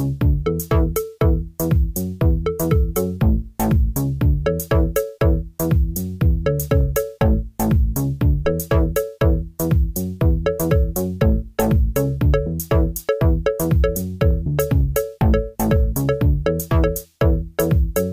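The audio contains a phantom power thump at 8.45 s, a deep low-frequency thud peaking at about -20 dBFS that dies away within roughly 20 ms, ending by 8.54 s. It comes from a supply being switched on a live input, with the voltage step passing through the coupling capacitors.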